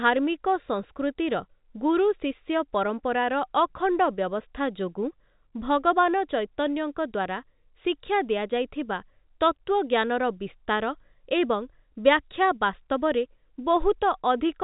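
No faults detected in this speech.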